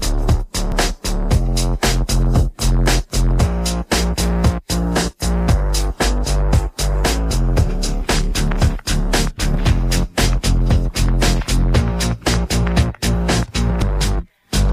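At 0.72 s there is a small forward jump in the sound, with roughly 20 ms missing and the two sides butted together with no gap. At 13.82 s the same thing happens on a larger scale, with about 70 ms gone. Both are likely dropped buffers (overrun), where the recording software fell behind and the hardware overwrote audio that had not yet been collected.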